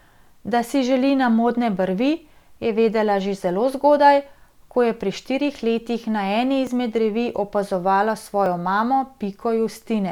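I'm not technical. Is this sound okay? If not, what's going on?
No. The speech skips ahead slightly at 6.67 s, after "štirih letih na eni", and at 8.46 s, after "opazovala". Each skip is probably a dropped buffer (overrun): the recording likely missed a tiny slice of sound, roughly a hundredth of a second the first time and a hundredth and a half the second.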